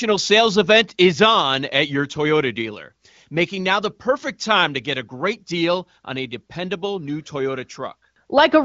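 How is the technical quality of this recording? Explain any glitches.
The technical quality of this recording is good, and there are no glitches to explain.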